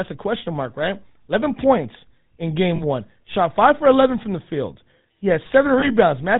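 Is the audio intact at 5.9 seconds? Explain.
No. At 5.9 seconds the audio is at the tail of a lost GSM frames event that runs from 5.8 to 5.9 s. The missing stretch is about 20 ms long, which fits a single dropped frame. The decoder covers the gap by reusing the last good frame's settings. The speech is briefly frozen into a rough, metallic ring. It is too short to fade into silence.

The speech also carries GSM full-rate codec damage throughout, and that includes this moment. The codec rebuilds speech from a vocal-tract model driven by evenly spaced pulses. It keeps only every third excitation sample. The sound points to a 13 kbps full-rate stream. Nothing above 4 kHz survives, so the speech sounds band-limited and dull. A buzzy, gravelly roughness is plainly audible.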